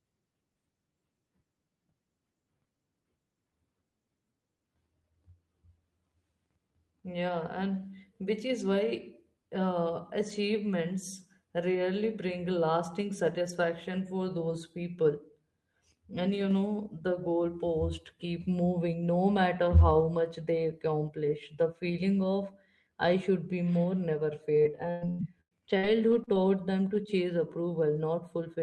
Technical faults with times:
24.63-26.36 repeated packet loss (robotic sound)

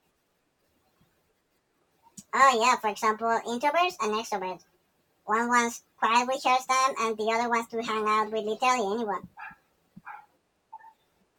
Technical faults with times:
0.00-11.38 wrong sample rate

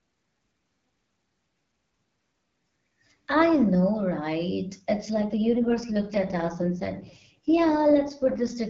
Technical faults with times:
5.14-8.56 AMR rate drop

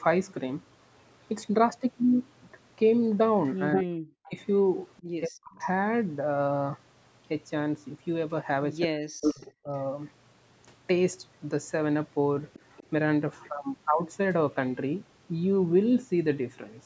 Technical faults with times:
3.72-4.31 echo leak
3.81-4.36 speech suppressed in double talk
4.97-5.02 echo leak
5.24-5.59 speech suppressed in double talk
5.60-5.65 echo leak
8.85-9.72 speech suppressed in double talk
9.21-9.29 echo leak
12.53-12.87 echo leak

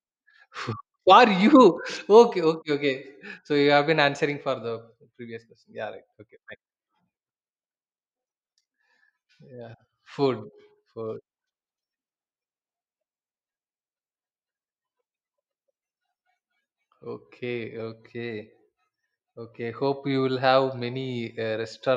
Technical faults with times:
none

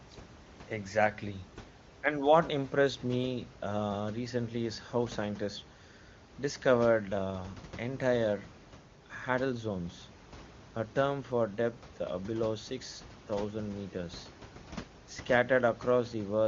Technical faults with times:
none

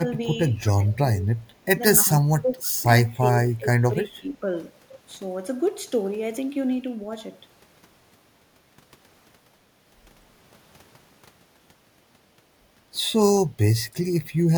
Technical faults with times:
0.62-1.40 speech suppressed in double talk
2.03-2.75 speech suppressed in double talk
3.03-4.46 speech suppressed in double talk

